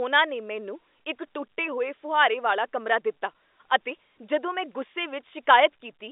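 Nothing goes wrong anywhere in this speech recording, which just has the narrow, boxy sound of an ordinary telephone line, with nothing above roughly 3.7 kHz getting through, the way a landline call normally comes across.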